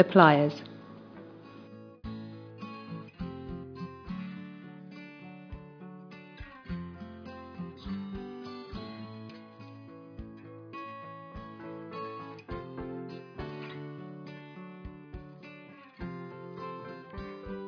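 No technical faults occur anywhere in the audio, so there is nothing to describe in time order.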